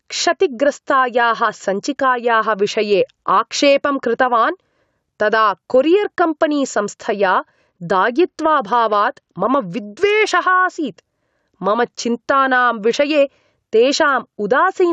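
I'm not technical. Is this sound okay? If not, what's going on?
No. Throughout the clip there is gain pumping: the microphone level is likely set far too high, so an automatic limiter keeps pulling it down whenever the voice gets loud. Loud and soft parts end up closer in level, and everything sounds squashed.

From 7.09 to 10.65 s there is a Bluetooth SBC bit pool drop. The wireless link got crowded, so the phone sharply cut how much detail it sent to keep the audio going. The speech turns dull and muffled, with a gritty roughness, until it recovers.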